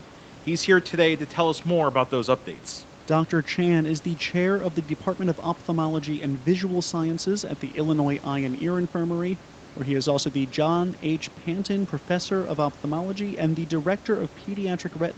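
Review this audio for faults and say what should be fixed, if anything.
Nothing needs fixing: the speech shows the normal band limit of an Opus call path, with no content above 8 kHz, and the room noise sits about 23 dB below the speech, as expected for a recorded call.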